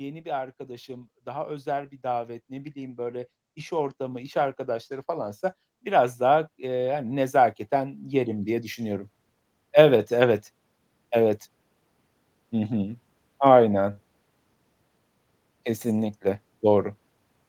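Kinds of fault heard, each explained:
Automatic gain rising, 0.22 to 9.06 s: the gain control judged the incoming speech too quiet and kept raising its amplification, about 17 dB in all, so the voice and the background noise swell up together slowly across those nine seconds rather than jumping.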